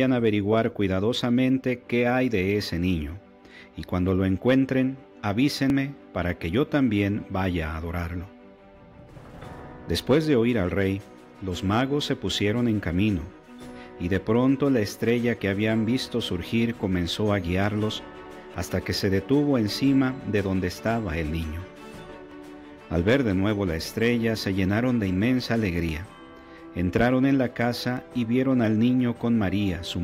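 There are abrupt small jumps forward in the audio at 5.7, 18.54, 22.31, 25.89 and 27.97 s, with no gap of silence. The first skips roughly 40 ms, the rest about 20 ms each. That's likely a dropped buffer (overrun), where chunks were overwritten before being read.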